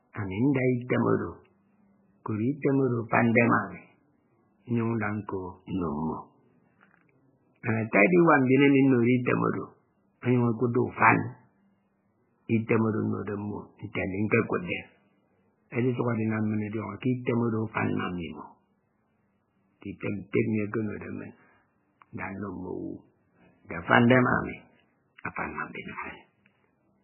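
From start to finish the speech has nothing above 3 kHz. The treble is simply gone, cut at a fixed point. Heavy codec damage runs through the whole clip. The sound is watery and swirling, and sibilants turn to metallic chirps. Weak frequency components switch on and off between frames, and consonant attacks smear. The likely cause is MP3 compression starved of bits. The encoder dropped the top band and zeroed quiet detail, which fits a bitrate around 8 kbps.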